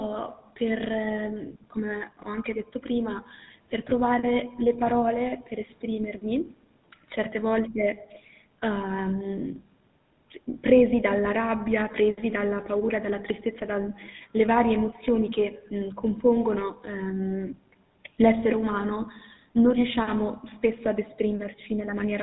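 GSM full-rate codec damage runs from start to finish: the speech is squeezed into a rate that fits 13 kbps, rebuilt from a vocal-tract model fed by sparse, evenly spaced pulses, and cut off above 4 kHz, leaving a plainly audible buzzy, gravelly roughness on every phrase.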